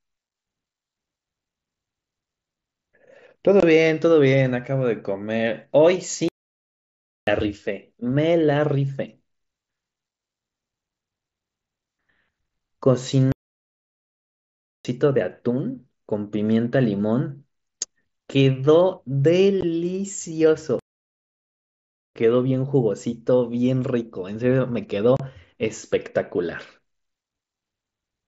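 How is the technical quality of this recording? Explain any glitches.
The recording has two kinds of fault: brief dropouts from Bluetooth packet loss, and three longer silences from playback stalls. The wideband headset codec underneath adds only a light grain on louder sounds.

Unconcealed Bluetooth headset packet loss occurs at 3.60 to 3.63 s, 19.61 to 19.63 s, and 25.17 to 25.20 s. Packets between headset and phone went missing. Nothing filled the gaps. The result is hard-edged holes of 22.5, 15 and 30 ms, which fit runs of 7.5 ms packets.

Playback stalls occur at 6.29 to 7.27 s, 13.32 to 14.85 s, and 20.79 to 22.15 s. The sound stops mid-flow for about 1.0, 1.5 and 1.4 s, then resumes. The likely cause is the player running short of data or being blocked until it recovered.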